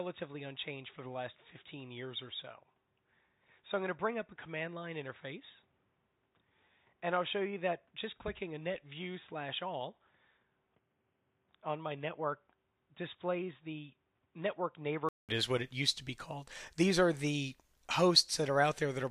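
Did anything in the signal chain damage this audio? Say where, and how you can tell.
Yes. Until 15.29 s the sound is dull and boxy, with nothing above 3.8 kHz. The level sits about 10 dB lower over a different noise floor, about 40 dB down. A 200 ms gap precedes full band. The input stage was likely switched to a poorer device.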